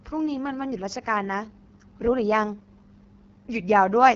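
AMR wideband (HD Voice) codec damage runs throughout this speech clip: it sounds rough and raspy, with nothing above 7.6 kHz, which points to AMR-WB at a low rate near 8.85 kbit/s.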